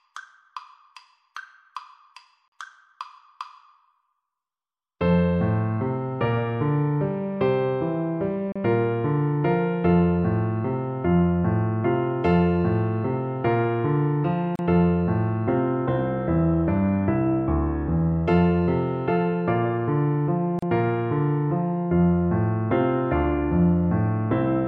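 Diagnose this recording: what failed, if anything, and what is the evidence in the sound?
Gap at a join of encoded pieces, codec stage: 42 ms, then 34 ms, silences at 2.48, 8.52, 14.56 and 20.59 s, left by untrimmed encoder delay and padding.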